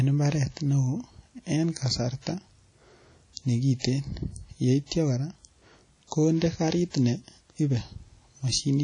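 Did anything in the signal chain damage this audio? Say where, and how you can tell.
Yes. The codec stage did it, and it runs the whole way through this speech. The sound has a ringing, washy quality, with a hiss that swells and fades along with the talker, and nothing survives above 10 kHz. That smeared noise around each sound, plus the hard top-end cutoff, is the likely signature of WMA compression at a low bitrate, plausibly around 32 kbps. The long transform blocks spread the quantisation noise, and the weaker components get zeroed out entirely.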